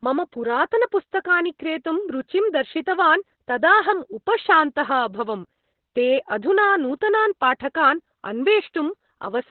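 Throughout, the speech is muffled, hoarse and faintly robotic, with nothing above 4.2 kHz: heavy Opus voice compression in narrowband SILK mode, consistent with about 8 kbps.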